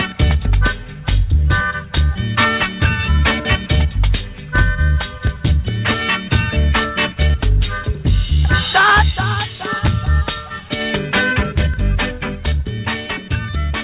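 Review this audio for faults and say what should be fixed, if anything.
Nothing in this audio needs fixing, as no faults can be heard.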